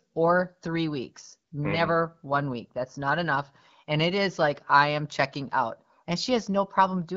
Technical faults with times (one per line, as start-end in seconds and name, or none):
none